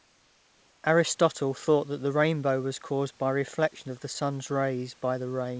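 From the start to 0.84 s, the room background is a steady, featureless hiss about 4 dB quieter than the real background that follows. This is likely comfort noise in place of the background: discontinuous transmission paused sending, so the receiver synthesised roughly matched noise.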